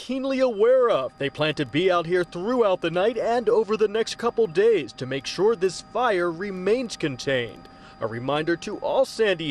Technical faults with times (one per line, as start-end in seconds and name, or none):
0.00-9.51 MP2 compression